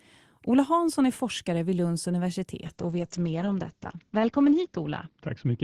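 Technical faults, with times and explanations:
2.67–5.63 s, call bitrate drop: from 2.67 s to the end the speech goes rough and muffled, as though the call's bandwidth estimate collapsed and the encoder was told to drop from 40 kbps to just 8 kbps. That forces much coarser coding, so things turn gritty and watery. At that rate the top end is also cut, from 20 kHz down to 8 kHz, which dulls the sibilants. It sits at the bottom for about 2.1 s and doesn't come back before the clip ends.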